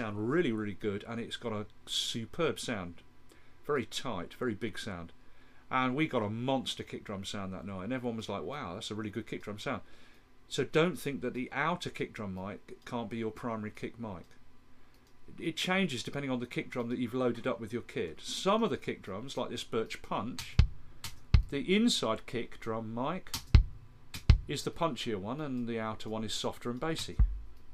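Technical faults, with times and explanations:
No technical fault can be heard anywhere in the clip. There is nothing here that needs a time or an explanation.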